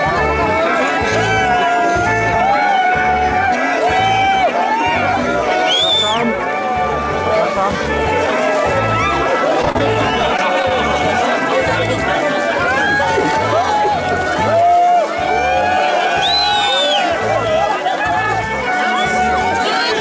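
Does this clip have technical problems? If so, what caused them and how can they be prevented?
Yes. Between 9.62 and 10.71 s there is repeated packet loss, heard as a choppy, robotic stretch. Ten short holes follow one another, the longest about 29 ms. Each is patched by stretching the last bit of sound, which gives the robotic texture. About 11% of that span is concealed, and some pieces are simply missing. The sound arrives through a wideband call codec with nothing above 8 kHz. A more stable network and a larger jitter buffer would prevent this.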